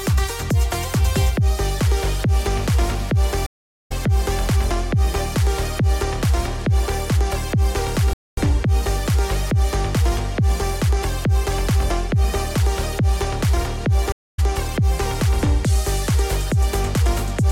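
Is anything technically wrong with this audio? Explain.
Yes. The audio breaks off three times.

At 3.46 s the sound cuts out for about 413 ms, and at 14.12 s for about 231 ms. These are stream reconnects: the connection dropped, the player went quiet, then rejoined the stream and started a fresh decoder mid-stream. Because the stream kept advancing while the link was down, playback resumes at a later point rather than where it stopped, roughly a third of a second later after the first gap and about a fifth of a second after the second, so a short stretch of material is simply skipped.

At 8.13 s there is a separate playback stall. The output goes silent for 240 ms partway through the sound, and that gap is then followed by a continuation. The likely cause is that the player ran out of buffered data or had its audio thread held up, leaving nothing to send to the output until it caught up and playback resumed.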